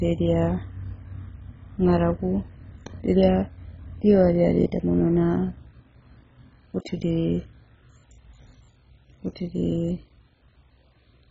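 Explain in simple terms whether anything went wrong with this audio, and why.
Something did go wrong, and it runs through the whole recording from start to finish. The speech sounds dull and muffled, with nothing above about 7.5 kHz, and there's a gurgly, grainy roughness on top. That's heavy MP2 compression, likely squeezed far too hard. The format divides the sound into slices by pitch, and when it's short on space it switches off the top slices and stores the rest crudely, which leaves that murky, bubbling texture.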